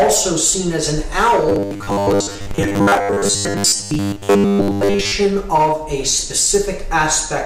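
From 1.49 to 5.12 s, robotic sound from repeated short buffers: a rigid 100 Hz buzz, likely from roughly 10 ms blocks replayed for most of the stretch.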